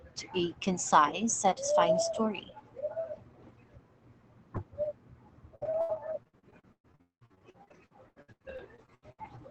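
From 5.55 to 9.20 s, repeated packet loss leaves gaps, up to 195 ms, patched by extending earlier sound, so speech turns choppy and robotic.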